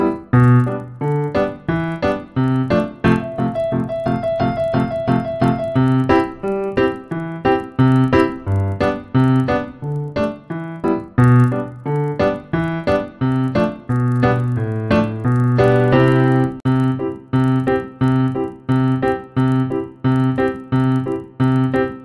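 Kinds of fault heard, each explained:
Resampler restarted on every block: a buzz at 25 Hz rides on the sound throughout, present only while there is signal. Each 40 ms block of the 48 kHz to 24 kHz conversion was converted separately, so every block edge carries a small error that repeats at the block rate.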